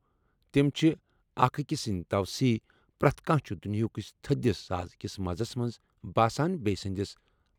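Listening to the speech recording, nothing technically wrong stood out at any point.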